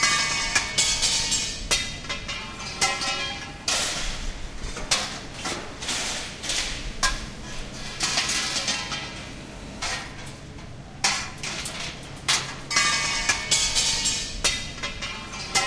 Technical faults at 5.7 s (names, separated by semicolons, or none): none